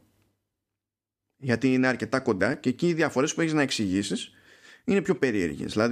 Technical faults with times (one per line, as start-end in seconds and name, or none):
1.06-5.50 clock drift buffer slips